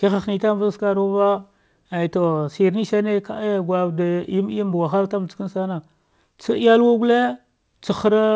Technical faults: none

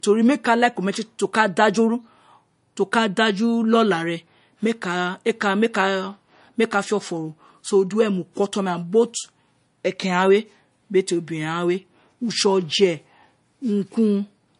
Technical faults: low-bitrate audio saved at a high bitrate

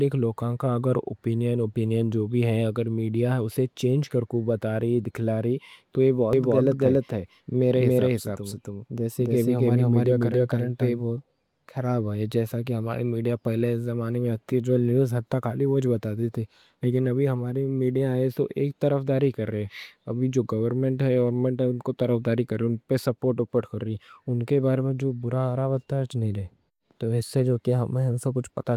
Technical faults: doubled audio track

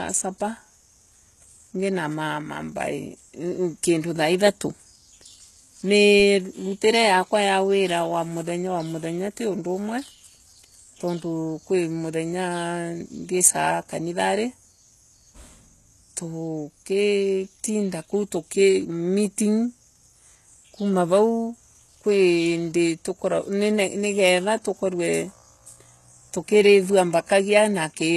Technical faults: HE-AAC compression

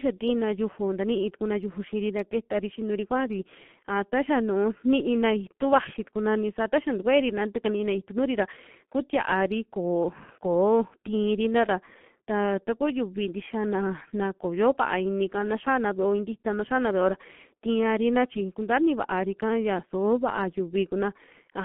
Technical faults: G.723.1 codec

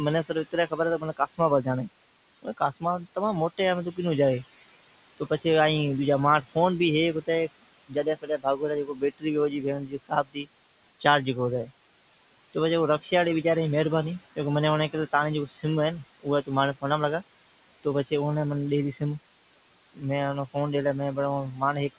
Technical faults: noise suppressor artifacts; speech cut by the noise suppressor

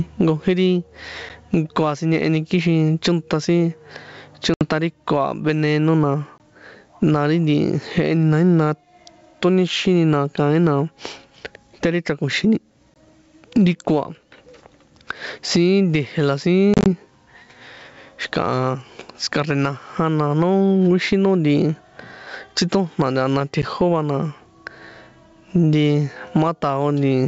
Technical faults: gain pumping; packet loss on an ADPCM call

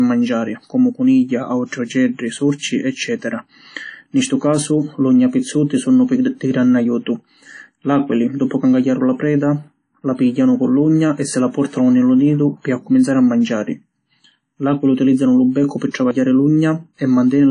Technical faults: WMA compression; pre-echo

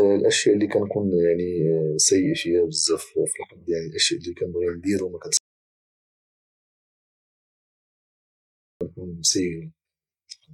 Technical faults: audio dropout to silence

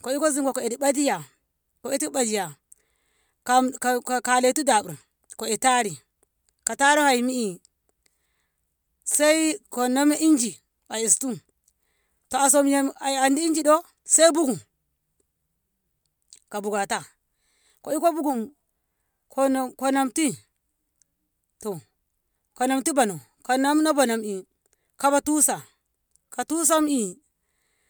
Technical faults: none

